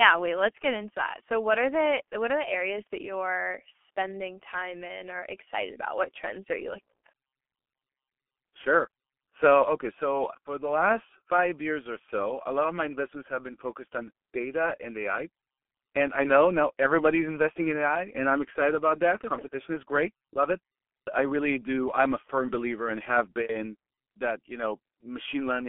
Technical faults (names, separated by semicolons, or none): G.723.1 codec